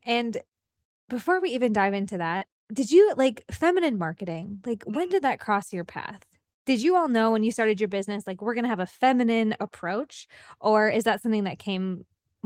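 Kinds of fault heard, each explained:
Short concealed packet loss: about 40 ms of the call's audio arrived too late or not at all for the decoder, so the receiver invented roughly 35 ms to bridge the gap, extending the preceding sound and then blending back into the real signal. In this speech it shows as a brief smear at about 2.37 to 2.43 s, between "we even dive into" and "did you like feminine", where the join turns blurred.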